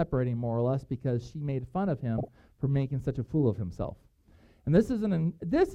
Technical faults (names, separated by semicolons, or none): corrupt frame decoded